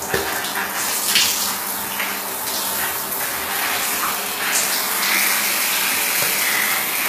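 From start to finish the top end sounds gritty and metallic, bright but not quite real, and nothing comes through above 14.9 kHz. That's likely HE-AAC compression, treble rebuilt from copied lower bands, which fits a low bitrate around 20 kbps.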